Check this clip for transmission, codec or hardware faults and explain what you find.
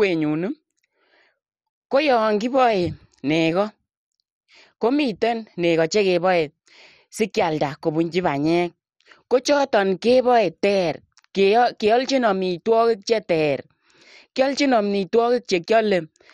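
The speech carries one codec fault from start to finish. Throughout, it sounds like MP2 compression, likely at a rate near 56 kbps: starved sub-bands switch off and flicker, nothing survives above 15.2 kHz, and what remains has a gurgling, granular edge, unlike a simple low-pass filter's clean dullness.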